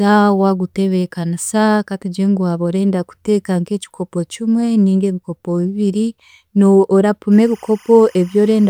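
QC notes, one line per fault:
7.32–8.69 s, timecode bleed. A thin chirping warble rises under the speech for the final stretch and runs to the end. Linear timecode from a neighbouring track or cable has leaked into the audio path. The code is a square wave that flips between two pitches, roughly 1 and 2 kHz. Its bit pattern repeats at 25 frames per second, so the chirp has a steady, mechanical rhythm. It sits low, about 30 dB below the speech.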